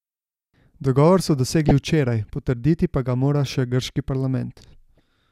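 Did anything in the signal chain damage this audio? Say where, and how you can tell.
Yes, DAB burbling at the codec stage. Short noise blips in single sub-bands appear at 1.36–1.71 s, 3.49–3.55 s and 4.97–5.00 s. Uncorrected bit errors make MP2 sub-bands jump.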